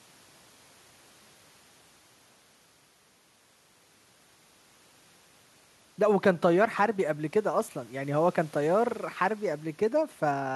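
No technical fault can be heard anywhere in the speech recording, and the signal holds steady throughout.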